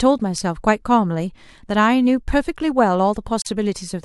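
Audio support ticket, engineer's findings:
Gap at a join of encoded pieces, 3.42 to 3.46 s. About 43 ms gap cutting into running speech, edges smeared by the codec. Speech resumes right where it stopped. Probable component: segmenter/concatenation. Pieces encoded separately and stitched untrimmed, so encoder start delay plus last-frame padding stay in. Repeat rate of 4 s points to 4 s chunks. Worth checking the trim settings there.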